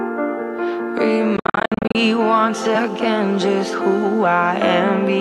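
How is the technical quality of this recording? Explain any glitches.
The recording has one clear glitch. Between 1.37 and 1.95 s the sound breaks up into a series of short holes, totalling about 363 ms of silence spread over 580 ms, the longest about 58 ms. This is a Bluetooth dropout, likely from packets arriving too late and being discarded. The output cuts out and resumes further along, as if playback had continued. A waveform shows flat gaps, and a spectrogram shows narrow blank vertical stripes.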